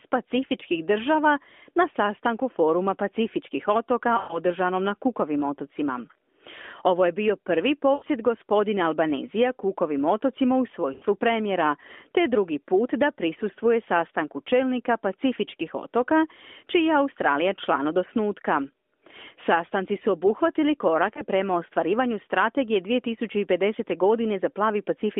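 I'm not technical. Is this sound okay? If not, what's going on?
No. Lost AMR speech frames: radio errors corrupted small chunks of the phone signal, so the decoder repeated its last good sound, fading out, producing brief smeared dips or warbles.

This happens four times. Just after "sastanku foruma pacifičkih otoka", from 4.18 to 4.39 s, the sound stretches and sags for about a tenth of a second. There is a shorter gap from 7.94 to 8.04 s. Another falls between "otocima u" and "premijera te drugi put", from 10.94 to 11.04 s. The last is a very quick blip at about 21.14 s, between "su obuhvatili" and "prema ostvarivanju strategije", which points to just one lost chunk.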